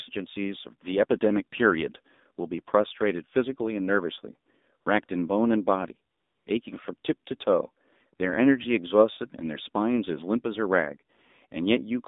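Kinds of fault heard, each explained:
AMR narrowband mobile codec: Throughout, the speech is confined to a 200 Hz to 3.7 kHz band and rebuilt by a vocal-tract model driven by sparse pulses, giving a plainly buzzy, synthetic quality that fits a low rate of about 7.4 kbps.
AMR comfort noise: At 4.82 to 4.86 s, 5.06 to 5.08 s and 6.12 to 6.46 s, speech frames stop and the receiver fills the gap with smooth synthetic noise built from a rough level and spectrum estimate, switching abruptly in and out.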